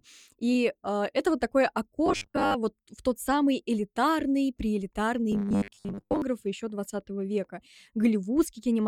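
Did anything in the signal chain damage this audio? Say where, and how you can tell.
Yes. Robotic sound from repeated short buffers appears at 2.06–2.56 s and 5.32–6.22 s, where the speech hardens into a fixed 100 Hz metallic buzz. This points to the driver or buffer stage, likely starved and looping a 10 ms block that replaces about half, then most, of the real audio.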